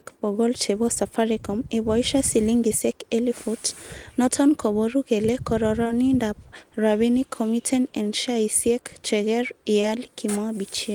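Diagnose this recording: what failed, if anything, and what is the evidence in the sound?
The network stage failed to deliver short stretches of the call on time, producing short concealed packet loss. Two back-to-back 20 ms gaps from 5.83 to 5.91 s and one at 9.81 to 9.85 s were patched by extending the preceding sound, leaving brief smears or wobbles.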